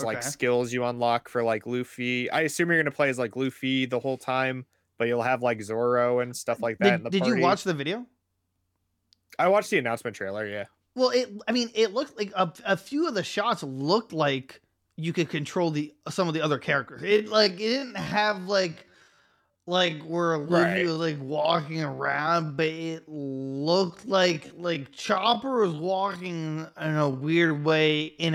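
Software likely stretched the final stretch of the recording to fill a longer slot, holding the pitch steady by repeating short slices of the signal. From 17.02 s to the end at 28.34 s, this time-stretched section runs at about 0.55 times its natural pace, so the speech abruptly slows to just over half speed while its pitch stays where it was. The repeated slices leave the slowed speech dragging.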